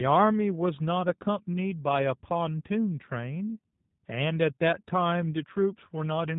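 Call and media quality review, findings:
G.729 codec damage, whole clip, plainly audible. Speech band-limited, nothing above 4 kHz, with a rough, buzzy, synthetic edge. Probable component: VoIP narrowband encoder, consistent with 8 kbit/s G.729A. Mechanism: speech rebuilt from vocal tract filter, pitch predictor and sparse pulses per 10 ms frame, so fine waveform detail is lost.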